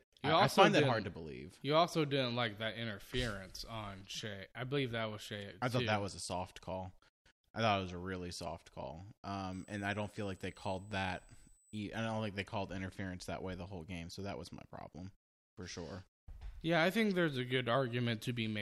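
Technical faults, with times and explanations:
9.53 to 11.78 s, USB whine: after "a really soft call", a steady high tone at 8 kHz, strongest at 16 kHz, sits roughly 20 dB below the speech until "don't think they called". The USB bus draws current in 125-microsecond microframes. That current leaks into the audio through power or ground.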